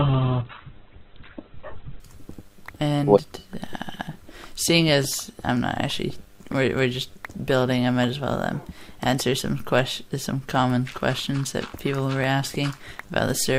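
From 0 to 2.0 s the audio plays as an adaptive stream starting at a low bitrate: nothing above 4.2 kHz and stronger codec artefacts, pointing to roughly 8 kbit/s Opus. At 2.0 s it switches without a gap to a fuller version, consistent with about 64 kbit/s.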